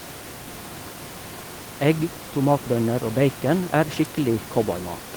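Nothing stood out on listening to this speech recording, with the room's background noise sitting about 14 dB below the talking.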